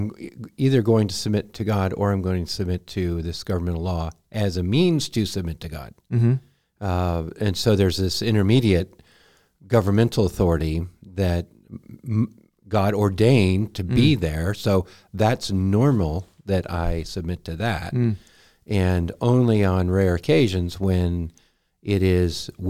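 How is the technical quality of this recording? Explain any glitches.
No glitches are audible anywhere in the recording, and the speech signal holds steady and continuous throughout.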